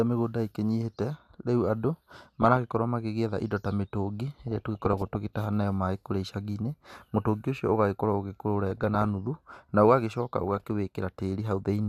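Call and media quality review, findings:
DAB burbling, 2.42–2.79 s, 4.48–5.15 s, 8.70–9.09 s, 10.42–10.70 s: burbling noise blips over speech. Weak DAB reception lets a small fraction of bit errors past correction, corrupting MP2 sub-band levels frame by frame.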